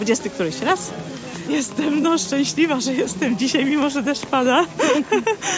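No technical faults are present.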